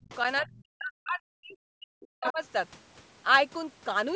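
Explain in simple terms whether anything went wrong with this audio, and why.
Speech was suppressed in double talk, likely because both sides spoke at once and the echo canceller couldn't tell the talker from the loudspeaker echo, so it turned everything down. The speech sinks very low or cuts out from 0.02 to 0.11 s, 0.41 to 1.57 s and 1.74 to 2.4 s.

The other side's voice is leaking through, likely because the echo canceller left some loudspeaker sound in the microphone. Faint scraps of that second voice appear at 0.10 to 0.15 s, 0.39 to 0.58 s and 2.01 to 2.05 s, and a much clearer one at 2.23 to 2.32 s.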